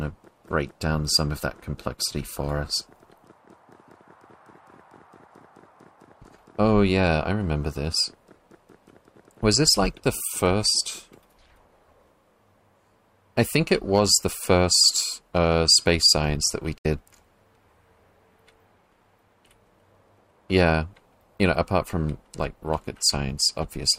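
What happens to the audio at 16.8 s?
At 16.78 s the audio drops out for about 80 ms, returning at 16.86 s: a digital broadcast dropout. The receiver failed to decode roughly 64 ms of signal, consistent with two lost frames, and muted with a quick 8 ms fade, leaving a brief silent hole.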